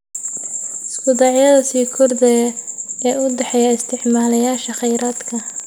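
A steady pulse, likely electrical interference from nearby equipment or a faulty connection or power supply, gets into this speech recording from 3.30 s to 5.61 s and produces a train of clicks. The pulses arrive at a regular 10 per second, around twenty of them, each with much the same shape and roughly as loud as the speech itself. They are heard as an even ticking laid over the talking that carries on through the pauses as well.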